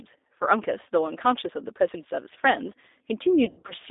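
Speech, carried throughout by the G.729 codec: band-limited to roughly 300 Hz–3.7 kHz, with a rough, synthetic buzz that fits an 8 kbit/s pulse-coded model rather than plain low-pass filtering. From 3.45 to 3.74 s, VoIP packet loss concealed by the speech codec stretches the sound into a buzzy tone or coloured noise that fades. About 160 ms goes missing in gaps up to 80 ms, and the sound stays weak between them.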